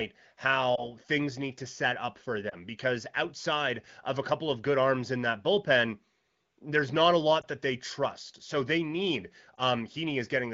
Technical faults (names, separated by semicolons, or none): lost AMR speech frames